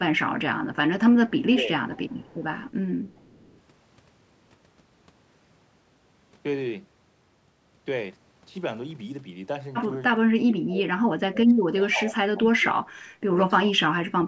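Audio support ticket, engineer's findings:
Echo leak at 1.29–1.47 s, 1.92–2.71 s and 3.07–3.60 s. Faint delayed copy of the speech trailing about 408 ms behind, roughly 25–35 dB below it. Likely far-end loudspeaker pickup the echo canceller failed to remove, returned down the line.

Speech suppressed in double talk at 1.53–1.72 s, a dip of around 10 dB. Again from 10.19 s to the end, about three seconds affected and dropping as much as 30 dB. Likely echo canceller unable to separate near talker from echo, attenuating both.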